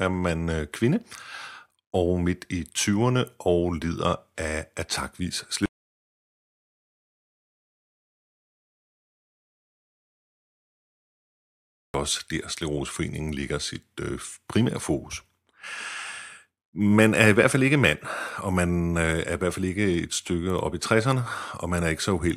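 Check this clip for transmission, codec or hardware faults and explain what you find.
Audio dropout to silence runs from 5.66 to 11.94 s, about 6.3 s of lost speech. The input was likely cut, through a disconnected device, failed link or mute, while recording continued writing silence. Speech stops mid-flow into dead silence without room tone, then resumes abruptly.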